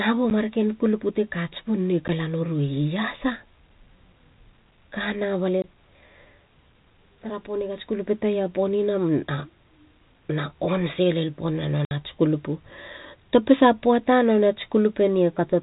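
Packet loss filled with silence cuts hard gaps at 0.3 s, 2.08 s, 5.62–5.64 s and 11.85–11.91 s, with lengths that fit 10 ms packets. The speech drops to dead silence with hard edges rather than being smoothed over by concealment.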